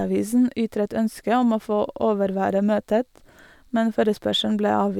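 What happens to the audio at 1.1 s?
At 1.1 s the speech carries on without any dropout, glitch or distortion, and the audio is intact there.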